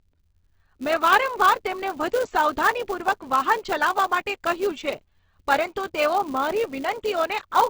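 Opus compression runs throughout: nothing is heard above about 8 kHz, and tones turn grainy and rough, likely from a heavily squeezed low-bitrate Opus music-mode encode. A filter restarted on every block also runs throughout, its state reset each block, adding a steady 200 Hz buzz that tracks the speech level.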